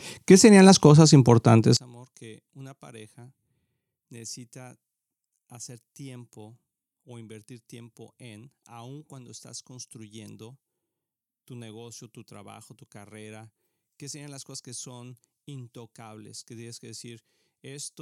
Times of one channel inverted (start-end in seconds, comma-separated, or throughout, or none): 1.77-18.01